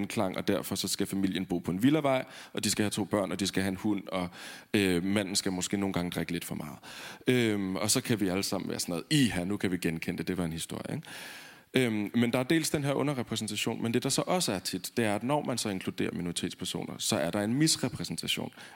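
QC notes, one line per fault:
Nothing to flag on this speech clip; I didn't hear a single problem worth a line.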